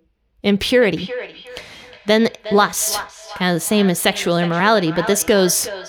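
From 0.79 s to the end of the clip, a feedback echo between two devices runs through the speech. Two devices in the same room share the call, so one device's microphone picks up the other device's loudspeaker playing its sound back. Each device's echo canceller removes only its own playback, so this leaked copy passes through. Each word comes back roughly every 400 ms, thinner and more ringing, peaking at about 12 dB below the speech.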